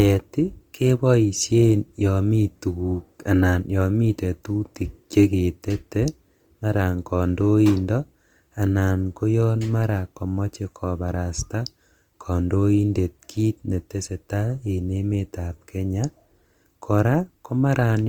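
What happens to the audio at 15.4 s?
At 15.4 s the speech is going through the same damage it carries for the whole clip: Opus compression, likely from an encode at a rate that fits about 24 kbps in the codec's music-style CELT mode. Short of bits, the encoder keeps each band's energy but refills the detail with folded copies of lower bands or with noise. The result is plainly audible: the speech sounds rough, grainy and noisy, while the bandwidth stays full, reaching about 20.2 kHz.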